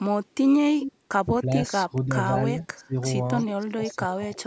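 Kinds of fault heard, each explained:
Echo leak: The far side is likely on a loudspeaker, and its echo canceller let part of what its microphone caught slip back into the call. The result is a delayed copy of the speech trailing about 336 ms behind, heard as short scraps near 0.81, 3.4, 3.88 and 4.33 s. The first is strongest, around 10 dB below the speech, while the later ones sit deeper, roughly 20 to 30 dB down.
Speech suppressed in double talk: When both ends spoke at once, the echo canceller likely could not tell the local talker from loudspeaker echo and turned everything down together. The speech audibly sags or drops out in pieces at 1.45 to 2.1 s, 2.54 to 2.66 s, 2.82 to 2.95 s and 3.66 to 4.29 s. The dips range from a mild few decibels to about 20 dB at their deepest.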